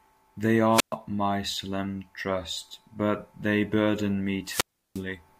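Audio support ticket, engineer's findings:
Wireless microphone squelch dropout, 0.71–0.95 s: hiss swells, then about 120 ms near-silence before "my solemn trust but". Analogue FM receiver squelch muting on a faded RF signal. 4.44–5.03 s, after "trust but they burden": same rise of static, longer hole of about 350 ms. Unlike a digital packet dropout, each mute is preceded by noise build-up rather than cutting cleanly.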